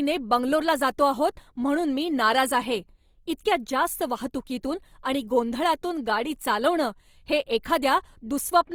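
A speech clip with plainly audible Opus compression throughout: grainy, rough texture despite content reaching about 20.3 kHz, likely from a low bitrate around 24 kbps.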